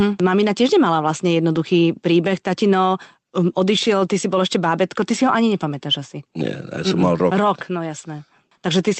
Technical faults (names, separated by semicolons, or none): none